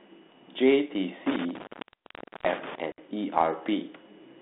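From 1.26 s to 2.78 s the speech suffers an intermittent contact: a loose plug or cable keeps breaking the connection, and in total the line is open for about 0.80 s. Each break starts and ends with crackle as the contact scrapes, and faint hiss remains inside the gaps. That scratchy, irregular edging sets it apart from a clean digital dropout, which cuts in and out silently.

Then, at 2.92 s to 2.99 s, comes packet loss on an ADPCM call. A 60 ms hole, which points to a few lost packets, is filled with silence and has hard, clean edges. Because the decoder's prediction and step size drift away from the sender's during the gap, the speech returns slightly distorted before settling. The narrow telephone band, roughly 200 Hz to 3.6 kHz, of the 32 kbit/s G.726 coding carries straight through.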